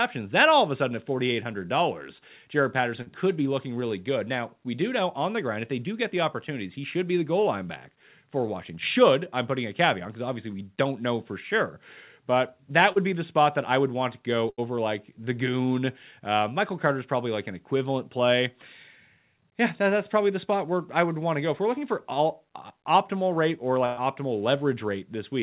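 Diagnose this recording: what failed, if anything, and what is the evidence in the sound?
Short concealed packet loss, a network fault masked at the receiver's jitter buffer, occurs at 3.02 s, just before "could be looking really", and at 12.92 s, before "be the spot that". Each is a brief smear where about 40 ms of audio never arrived and was replaced by a continuation of the preceding sound. Unlike a hard dropout, there is no silence and no click.

Bursts of packet loss occur at 14.50 s, where about 80 ms is lost, and at 23.86 s, after "uh optimal rate or", where about 120 ms is lost. Through the G.711 mu-law path, with nothing above 4 kHz, the concealment stretches the last sound, turning it down as the gap goes on, and then jumps ahead. That length, the fade, and the skipped material set these apart from the short losses.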